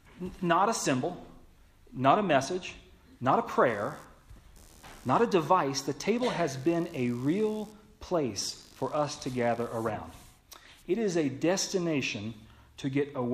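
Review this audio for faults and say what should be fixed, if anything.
From 3.68 to 9.67 s there's computer activity noise: a buzzy, chirping rasp pulsing around 70 times a second, roughly 30 dB under the sound. Processor or graphics load is shifting the shared ground under the audio circuit. To fix it, run the interface off a separate, cleanly grounded supply or use an isolated USB connection.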